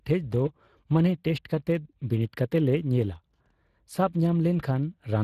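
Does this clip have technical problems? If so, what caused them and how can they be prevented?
Yes. Speex codec damage runs through the whole clip, plainly audible from start to finish. Speex is a CELP speech coder that rebuilds the voice from a predictive filter driven by a coded excitation signal. With a limited bit budget, that excitation is coarse, so the speech comes out grainy and hoarse. The damage is consistent with a rate of roughly 22 kbps, and nothing is present above 15.3 kHz. To prevent this, record or transmit with a modern codec such as Opus at a generous bitrate, or keep an uncompressed copy.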